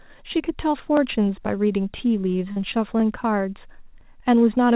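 At 0.97 s there is an overlapping-chunks fault. The speech appears to be handled in chunks of about 1 s, and the next chunk starts a little before the previous one finishes. About 13 ms of sound therefore plays twice at the join. It is heard as a quick click or a tiny stutter.

From 2.52 to 2.59 s there is short concealed packet loss. About 40 ms of audio never arrived in time. The receiver bridged the gap by extending the last sound and then blended back into the real signal. The result is a brief smear or wobble, and a short consonant there could be lost.

At 4.01 s the overlapping-chunks fault returns with the same 13 ms repeat and the same small click. Throughout, the call path limits the sound to below 4 kHz, which fits a G.711 A-law link.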